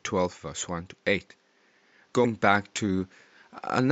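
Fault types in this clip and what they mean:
Compressed frames skipped: At 2.24 s the speech jumps forward, and a short stretch of sound is lost. Some whole blocks of the compressed stream were never played, most likely because they were missing or rejected as damaged by the decoder. The gap is roughly 70 ms, about three frames of 26.1 ms each. The room noise sits about 41 dB below the speech.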